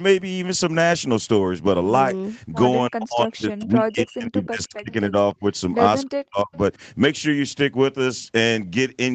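From 2.9 to 4.9 s, then at 5.07 to 5.15, 5.34 to 5.52 and 6.07 to 6.52 s, the speech dips sharply, by up to about 40 dB. This is likely speech suppressed in double talk, with the canceller ducking the talker. At 6.52 to 6.57 s, a faint echo leak follows, likely a copy delayed about 302 ms, about 30 dB below the speech.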